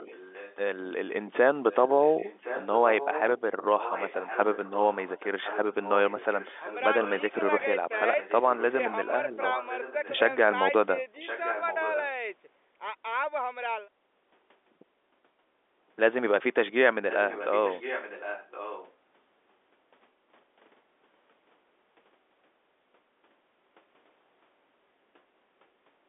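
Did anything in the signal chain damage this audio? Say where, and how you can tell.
Yes, there's an echo leak in call processing. A copy of the speech, about 10 to 20 dB down, trails by about 1.07 s at 0.0, 1.71, 3.78, 7.97, 9.09, 9.51, 11.2 and 17.09 s. It's likely a speakerphone echo canceller sending its mic pickup back.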